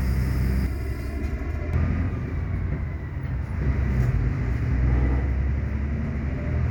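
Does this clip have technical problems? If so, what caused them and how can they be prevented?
Yes. From 0.66 to 1.74 s the sound turns hollow and phasey. This is channel delay causing comb filtering. One channel arrives roughly 3 ms late, and when the two are summed to mono, the shared content cancels at evenly spaced frequencies. The first notch sits somewhere around 150 Hz, and more follow up the spectrum. Aligning the channels in time before any mono fold-down prevents this.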